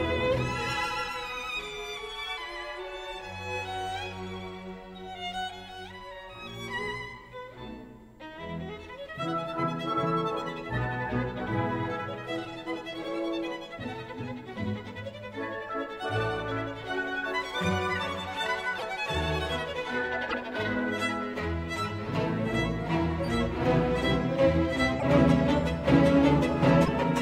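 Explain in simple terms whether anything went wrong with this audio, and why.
Four short glitches are audible near the end, at 18.77 to 18.83 s, 20.29 to 20.34 s, 24.99 to 25.03 s and 26.84 to 26.88 s. Each lasts 40 to 60 ms and sounds like a brief chirp, noise burst or skip. The likely cause is a broken MP3 bit reservoir. MP3 frames borrow storage space from earlier frames. When frames go missing, the next frames fetch the wrong data, so the audio jumps ahead and garbles for a frame or two, each about 26 ms long.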